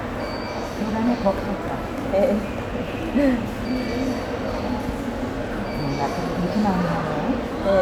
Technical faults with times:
none

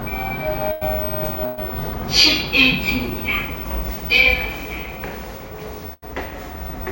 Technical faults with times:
0.71-0.83 burst of packet loss
1.45-1.59 burst of packet loss
5.93-6.04 burst of packet loss

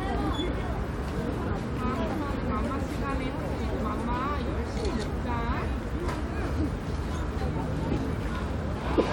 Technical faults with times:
none

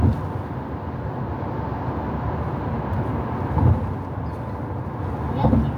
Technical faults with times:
none

